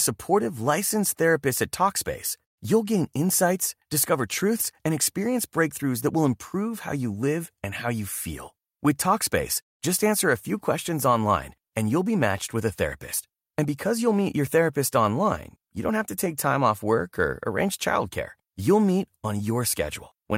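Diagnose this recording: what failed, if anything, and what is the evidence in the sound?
Nothing failed, and there is no evidence in the sound of a fault at any stage of the recording.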